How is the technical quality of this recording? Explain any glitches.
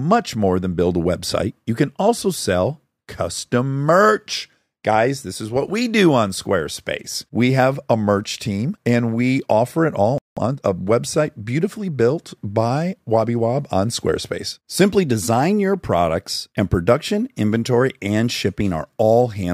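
There's one glitch here, a stall followed by the player hurrying to make up lost time, right after "we offer it all".

At 10.18 s the sound drops out for about 186 ms, until 10.37 s. That's a playback stall: the output just goes silent mid-flow, then resumes. The likely cause is the player running short of data or its thread getting blocked briefly, so nothing reached the output until it recovered. You hear it as an abrupt hole in the middle of a phrase, long enough to notice but short enough to feel like a hiccup.

From 10.37 to 10.73 s, just before "website beautifully built by", the speech runs at about 1.5 times normal speed. That's time-compressed catch-up: having fallen behind, the player trims its backlog by cutting out tiny slices of audio and cross-fading across the gaps, so pitch stays put while timing squeezes. To the ear it's a brief rushed stretch at normal pitch, then it settles back.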